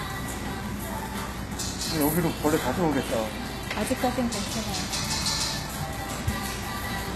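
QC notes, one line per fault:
Throughout: HE-AAC compression. The treble is likely rebuilt by spectral band replication: only the lower spectrum is properly coded, and the highs are copied upward from it under a coarse envelope, with the damage plainly audible enough to fit a very low bitrate near 16 kbps. The top end sounds bright but false, with a grainy, metallic sheen where harmonics fail to match across the crossover, and nothing at all above about 12.3 kHz.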